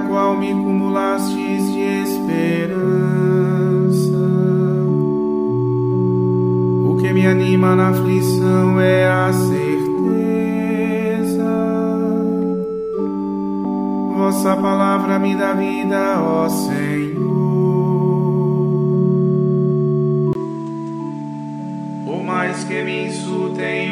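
An input switched to a poorer device at 20.33 s: after a 20 ms gap, the audio loses everything above 10 kHz through the end of the clip, level drops around 5 dB, and a new noise floor appears roughly 30 dB down, likely from a lower-quality microphone taking over.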